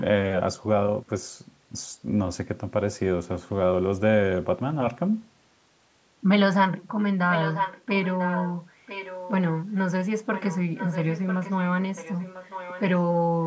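Echo leak at 7.3–8.57, 8.86–9.44, 10.34–10.59, 10.75–11.53 and 11.95–12.81 s in this speech recording, which stops at 8 kHz as call audio does. A copy of the talker returns about 997 ms late, roughly 10 to 15 dB quieter, likely because a loudspeaker-side echo canceller let its microphone's pickup through.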